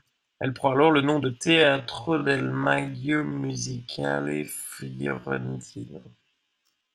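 From 1.39 s, right after "alors le nom de", the speech suddenly drops to roughly half its pace and stays there to the end, yet the pitch does not fall with it. The slowed stretch drags, each syllable drawn out. This is a time-stretched section, likely produced by software lengthening the audio while holding pitch, repeating short slices of the waveform to fill the extra time.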